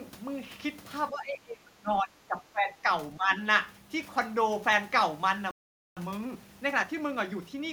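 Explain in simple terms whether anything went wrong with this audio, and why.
Several things go wrong in this speech clip.

From 1.1 to 2.88 s, the talker's voice drops sharply, for about a second and a half in total. It happens again, more mildly, from 3.17 to 3.3 s. This sounds like speech suppressed in double talk. The likely cause is that both sides spoke at once. The echo canceller then could not tell the talker from the loudspeaker's echo, so it turned the talker down too.

At 5.51 s the sound simply stops. Nothing plays until 5.97 s, a gap of nearly half a second. This is a playback stall. The likely cause is that the player ran short of data, or was held up, and went quiet until it could carry on.

From 5.97 s to the end, the speech runs 1.1 times faster than normal. The pitch stays the same. This is time-compressed catch-up. After the stall, the player snips out tiny slices and blends the joins to make up lost time.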